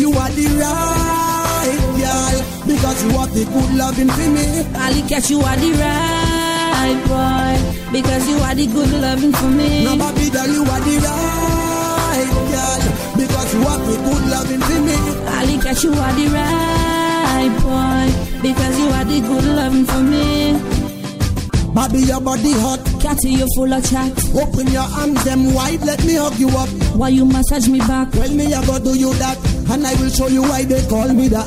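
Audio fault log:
8.58 s, compressed frames skipped: about one frame's worth of audio, roughly 20 ms, just drops out and the sound jumps ahead, which fits a 24 ms codec frame.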